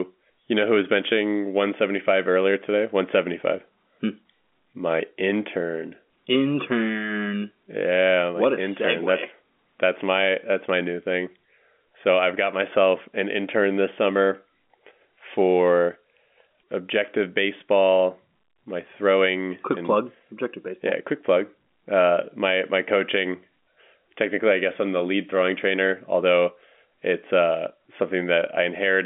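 No technical faults can be heard in the speech, which arrives over an ordinary G.711 A-law telephone line with its band confined to 200 Hz to 3.5 kHz.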